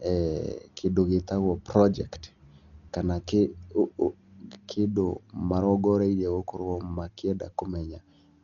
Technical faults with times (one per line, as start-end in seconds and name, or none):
0.00-8.43 Dolby Digital compression